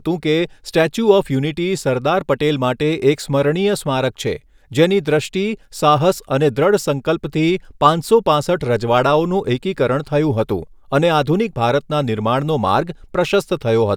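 No technical faults are audible.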